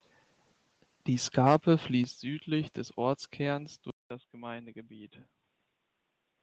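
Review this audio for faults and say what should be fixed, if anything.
At 2.04 s the speech level drops by about 6 dB in one step, likely the call software stepping the microphone volume down. Disable automatic input gain control and set a fixed, safe level.

From 3.9 s to the end, a 200 ms silence is followed by duller speech, about 10 dB quieter, over a faint new noise floor. The likely cause is the input switching to a poorer device. Lock the recording to one input device and prevent headsets from switching into their call profile mid-session.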